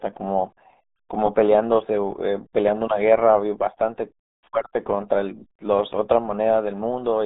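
From the first moment to the last, the speech carries the RealAudio 14.4 codec sound: a muffled, gargly voice confined to roughly 200 Hz to 3.7 kHz, with nothing at all above 3.8 kHz. The heavy coding damage points to an 8 kbit/s dial-up-era stream squeezing speech into very few bits. What separates it from simple telephone-style band-limiting is that gargly coding damage on the voice, not just missing treble.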